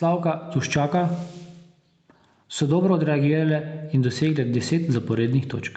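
Gain pumping runs through the whole speech clip, with the level swinging by something like ten decibels. The likely cause is microphone gain set far too high, with a fast limiter or compressor clamping down on every peak and letting go in the gaps. Loud and quiet moments sit squashed close together. The missing content above 8 kHz is just the call codec's band limit.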